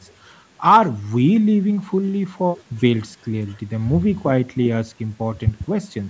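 No technical faults can be heard anywhere in this speech.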